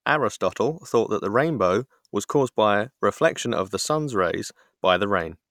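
Nothing audible in the signal of this speech recording points to a technical fault at any point.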